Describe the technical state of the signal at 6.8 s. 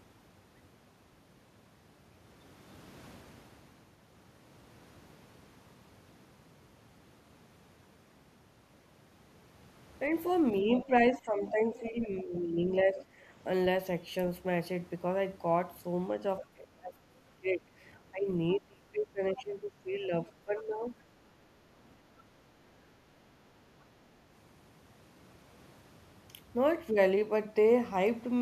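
At 6.8 s the speech comes through intact, with no audible dropout, distortion, clipping or other technical fault at that point.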